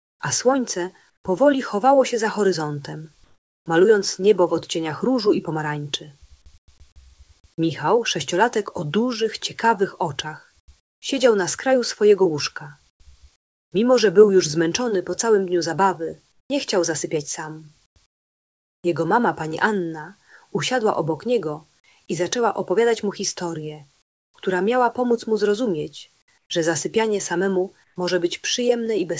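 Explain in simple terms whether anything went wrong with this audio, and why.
Something did go wrong. In several quiet stretches, the real background is replaced by comfort noise in place of the background. You hear a flat, even hiss instead of the room, and at 6.58 s and 24.02 s it is quieter. This happens from 0.0 to 3.66 s, 6.58 to 6.68 s, 10.6 to 13.72 s, 16.32 to 18.84 s, 24.02 to 24.34 s and 26.38 to 27.96 s. The likely cause is the sender pausing transmission during quiet moments, with the receiver filling the gap with made-up noise. The call codec also removes everything above 8 kHz.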